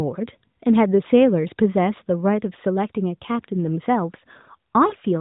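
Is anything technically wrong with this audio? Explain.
Yes, there's one problem. Near the end, from about 4.88 to 4.95 s, you get lost AMR speech frames: roughly 40 ms of audio, which fits two 20 ms frames failing their checks. The decoder covers the gap by carrying forward the last good pitch and vocal-tract settings at reduced gain, so the speech smears into a short warbly dip before it recovers. It's all in a narrowband mobile sound with mild codec colouring, consistent with AMR-NB at its top rate.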